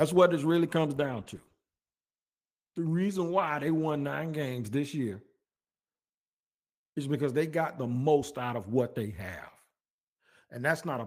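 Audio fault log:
0.96–5.11 s, call bitrate drop: just after "what this really comes", the speech turns coarse and watery and loses its top end, consistent with the encoder being told to cut its rate sharply after the bandwidth estimate fell, which fits a fall from about 32 kbps to 14 kbps. At the lowest point, lasting about 2.1 s, Opus spends too few bits on detail and discards high frequencies, so sibilants dull and the sound muffles before recovering.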